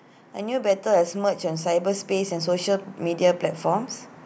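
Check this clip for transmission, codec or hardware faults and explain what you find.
One fault stands out in this speech clip. Automatic gain rising runs from 0.36 s to 3.95 s: the gain control judged the incoming level too low and raised its amplification step by step, climbing by about 8 dB across those three and a half seconds. Because the boost is applied to the whole signal rather than the talker alone, the voice and the background noise swell together, so the room seems to grow louder as the level creeps upward.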